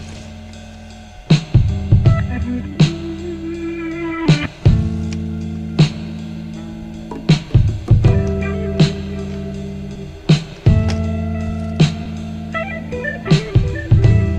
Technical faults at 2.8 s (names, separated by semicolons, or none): short concealed packet loss